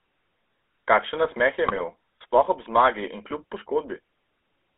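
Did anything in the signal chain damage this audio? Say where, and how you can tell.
Yes. Throughout the clip the speech has a buzzy, gravelly roughness and is confined to roughly 250 Hz to 3.5 kHz. That points to the GSM full-rate codec stage, which rebuilds the voice from a vocal-tract filter driven by sparse, regularly spaced pulses, consistent with a 13 kbps stream.

From 1.67 to 1.81 s the voice briefly breaks into a squawking, gargling burst. These are GSM bit errors from a noisy network link. Corrupted filter, pitch and gain values reached the decoder and distorted the spectrum frame by frame, which fits about six 20 ms frames.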